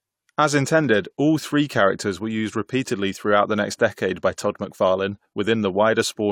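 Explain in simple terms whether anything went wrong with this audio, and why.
Nothing went wrong here; the speech comes through steadily the whole way, with no glitches, gaps or odd noises to point to.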